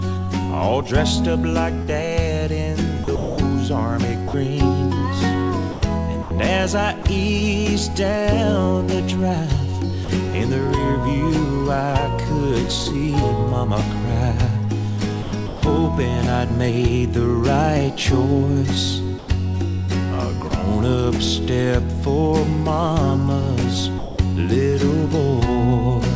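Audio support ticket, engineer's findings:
Sound chopped by the voice detector, 1.82–7.05 s: gaps totalling about 0.58 s swapped for comfort noise. Likely sender VAD toggling on quiet bits. Same at 15.23–15.63 s (0.26 s filled) and 19.19–20.51 s (0.12 s filled).

Sound dropped by the voice detector at 10.05–10.09 s (40 ms) and 23.99–24.19 s (200 ms): audio gives way to steady comfort noise, then returns. Likely VAD taking the sound for background and stopping sending until it retriggered.

Call path sounds like wideband G.722, with nothing above 8 kHz.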